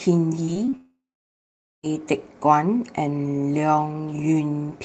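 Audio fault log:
0.45–0.74 s, repeated packet loss (robotic sound): The sound turns choppy here. Four short holes open in quick succession, the longest about 29 ms. Each hole is filled by stretching the last bit of sound before it, so almost a third of this span is patched rather than real. The patches repeat the same texture, which gives the mechanical, robotic edge. Bits of the original sound are simply missing.
0.76–1.89 s, long network dropout: For just over a second, no fresh audio comes through. At first the gap carries a smeared buzz, the last sound being drawn out and fading. That fill soon runs out, leaving roughly 0.84 s of silence. The likely cause is a lengthy network outage that the receiver could only cover briefly. When sound resumes, it picks up later on, and the lost stretch never plays.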